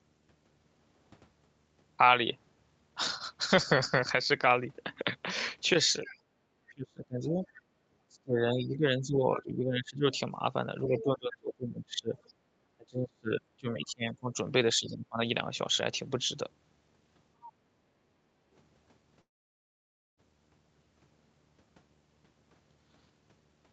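A low buzz sits under the speech throughout at about 40 dB below it. This is video or display buzz, where a screen or video cable couples into the audio at a 75 Hz field rate.

From 6.06 to 6.18 s a faint second voice, about 20 dB down, bleeds in. It returns at 7.44 to 7.48 s, 10.98 to 12.33 s (about 15 dB down) and 17.46 to 17.52 s. This is the other side's voice leaking through, likely loudspeaker echo that the canceller left behind.

The room sound dips by 6 dB at 6.26 to 6.38 s and by 10 dB at 7.71 to 7.8 s. This is background gated by the echo canceller, which briefly turned the microphone down while the loudspeaker played.

Between 6.7 and 15.19 s the talker's speech repeatedly sinks, by up to roughly 30 dB, for around five seconds in total. This is speech suppressed in double talk, likely the canceller ducking both sides during overlap.

At 19.21 s the sound trails off into a fading fill, then near-silence until 20.2 s. 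This long network dropout likely lost about 0.96 s of audio, which is never recovered.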